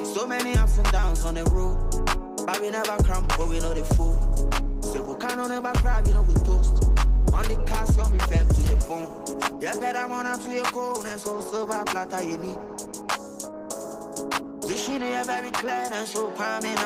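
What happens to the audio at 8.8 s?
Adaptive stream at a lower bitrate, from 3.95 to 15.95 s: the stream switched abruptly, with no gap, to a leaner encoding, which fits a drop to about 16 kbit/s Opus, so codec artefacts rise.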